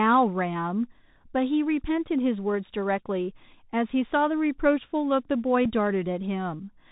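From the start, the speech carries the Bluetooth CVSD headset codec: nothing above 4 kHz, a grainy hiss beneath it, and scratchy s sounds where the one-bit delta step can't keep pace with loud high content, which fits 64 kbps CVSD. That grain sets it apart from a plain low-pass filter.

At 5.65 s a Bluetooth headset packet repeated: about 7.5 ms of audio went missing and the previous packet was played again, which suggests two lost packets. The result is a tiny buzzy tick, a repetition of the sound rather than the silent gap a dropout leaves.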